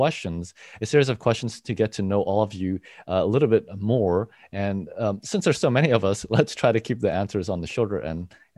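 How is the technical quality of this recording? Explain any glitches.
The technical quality of this recording is good, and there are no glitches to explain.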